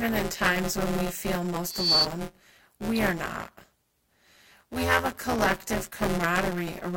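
Buffer tearing runs through the whole recording: a steady robotic buzz at 172 Hz rides on the speech, which fits a 256-sample buffer. Writer and reader have slipped out of step, so roughly a fifth of each buffer replays audio about 20 ms old, hard-spliced at both edges.

A loudspeaker feedback squeal appears from 1.64 to 2.06 s. A 4.5 kHz tone swells over roughly a third of a second to about 10 dB above the speech. The microphone is picking up its own loudspeaker, and the loop gain exceeds one at that frequency.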